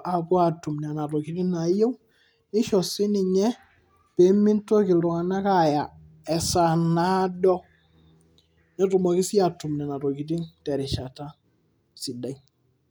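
No technical faults can be heard in this speech recording, so there is nothing to describe in time order.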